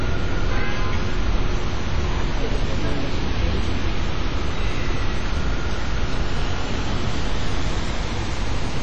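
WMA compression affects this recording of sounds from start to finish. The damage is heavy: sharp events ring and smear, textures turn washy, a hiss swells and fades with the signal, and nothing remains above 18 kHz. The likely cause is a Windows Media Audio transform encoder working in long blocks. It spreads quantisation noise over tens of milliseconds and discards weaker spectral detail, which fits a low bitrate of around 32 kbps.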